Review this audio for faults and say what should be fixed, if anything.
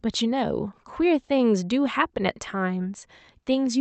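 Slight hiccups and an uneven, dragging tempo run through the whole clip. This is clock drift between sender and receiver: the sender's clock runs about 4% slow, so the jitter buffer keeps draining.

From 0.32 to 3.79 s, small repeated stretches make the speech sound faintly stuttery. These repeated timing corrections insert short pieces to stay in step, playing at 96% speed and adding roughly 150 ms overall.

To prevent this, the receiver should estimate the drift and resample the stream smoothly rather than patching the buffer with repeated fragments.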